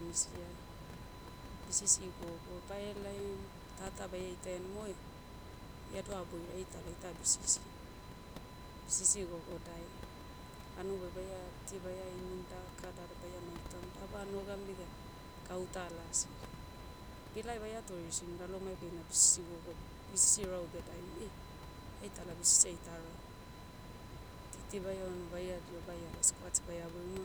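A speech clip carrying USB whine throughout: a steady 1 kHz tone, strongest at its fundamental and roughly 20 dB below the speech, from the bus's 1 ms frame activity leaking through power or ground. Unlike mains hum it sits far above 50 or 60 Hz.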